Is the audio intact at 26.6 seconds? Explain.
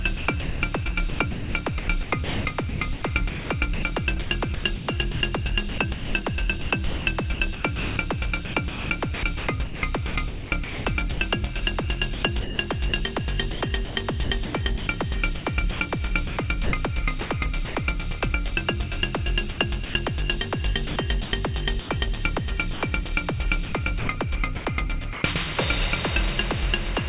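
Yes, the audio is intact at 26.6 seconds, with no dropout, glitch or distortion at that moment.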